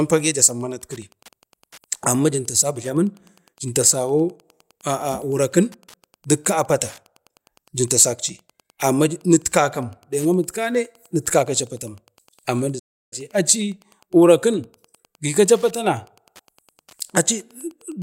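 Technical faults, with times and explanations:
Throughout: Wi-Fi interference. A faint, steady ticking runs under the speech about ten times a second, roughly 35 dB below it. A nearby Wi-Fi radio's beacon bursts, every 102.4 ms, are being picked up and rectified by the audio circuit.
12.79 to 13.13 s: playback stall. The speech cuts to silence mid-flow for about 0.33 s, then resumes. The likely cause is the player running short of data or its thread being blocked, leaving nothing to output.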